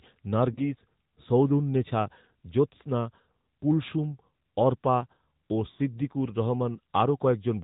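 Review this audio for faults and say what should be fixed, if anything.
The speech carries AMR narrowband mobile codec damage throughout. Nothing above 4 kHz survives, and the voice has a plainly buzzy, synthetic edge consistent with roughly 10.2 kbps AMR-NB. A simple low-pass filter would only dull the sound, without that vocoder-like texture. Carry the call over a wideband path, or capture the audio before it reaches the mobile link.

There are lost AMR speech frames at 0.54 to 0.60 s, a brief 20 ms dip that fits one missing frame, and at 5.72 to 5.79 s, just after "কুলসুম অর্পা ও", a 60 ms stretch that fits three. In each, the decoder repeats the last pitch and vocal tract settings at falling gain, so the sound smears and fades instead of cutting to a hard silent gap. Stronger radio coverage or error protection on the link would prevent them.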